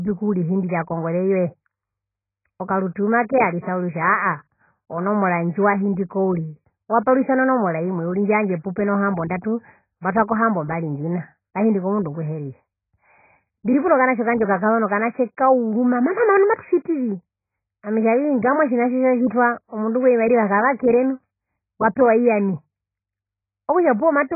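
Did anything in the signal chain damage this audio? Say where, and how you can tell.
Yes. AAC compression damages the whole clip at the codec stage: the speech is dull and smeared, with nothing above 2.5 kHz and a warbling, fizzy texture, which fits heavy AAC-LC coding at a very low bitrate around 12 kbps that likely lowered the cut-off and starved the remaining bands.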